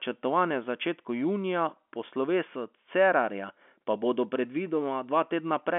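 No technical faults are audible.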